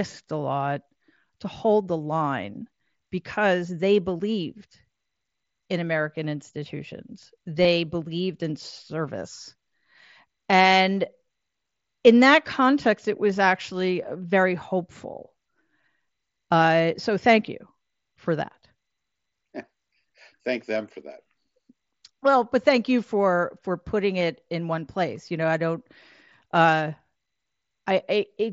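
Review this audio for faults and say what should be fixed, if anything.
Concealed Bluetooth headset packet loss occurs at 7.62 to 7.65 s and at 24.2 s. The receiver filled each gap, 22.5 ms and 15 ms, by repeating a matching recent stretch of waveform. On a waveform this shows as a brief repeated cycle, and on a spectrogram as a steady buzzy smear that breaks slightly where real audio returns. Keeping the headset close to the phone and clear of 2.4 GHz interference would prevent these dropouts.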